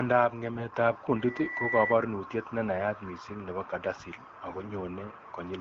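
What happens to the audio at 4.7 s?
AMR bit errors from 4.50 to 4.72 s: flipped low-priority bits misplace excitation pulses, so the voice turns gargly and hoarse, with smeared, noisy spectrogram harmonics.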